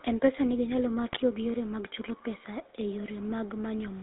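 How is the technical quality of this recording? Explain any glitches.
Quality is poor. This is narrowband telephone speech with plainly audible codec damage and one short burst of corruption.

The GSM full-rate codec runs through the whole clip. The sound is confined to roughly 200 Hz to 3.7 kHz, so nothing crisp survives at the top. The codec models the voice as a filter driven by a sparse pulse train, keeping only part of the excitation. That coarse excitation leaves a buzzy, gravelly roughness, which fits a 13 kbps full-rate link.

GSM bit errors strike from 1.06 to 1.20 s. Corrupted bits reached the decoder for this stretch, which points to several consecutive frames being hit. Wrong filter, pitch or gain values distort the spectrum and jolt the level frame by frame. The result is a brief burst of squawking and gargling that breaks up the speech before it recovers.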